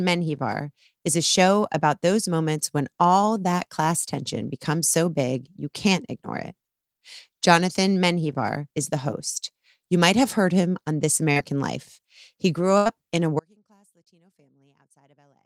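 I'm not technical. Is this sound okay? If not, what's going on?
No. At 11.31 to 11.38 s there is a short concealed packet loss. About 40 ms of the call never arrived in time, and the receiver papered over the hole by stretching the preceding sound, which leaves a brief smear or wobble.

At 12.78 to 12.87 s, just before "in a", comes a burst of packet loss. Roughly 80 ms went missing in one go. The receiver held and faded the last sound across the gap, then jumped ahead, so that stretch of speech is simply gone.

From 13.40 s, right after "in a", there is an audio dropout to a faint residue that lasts to the end. The speech cuts out abruptly, leaving only a very faint sound far below normal level. The likely cause is the signal being lost while the line stayed open.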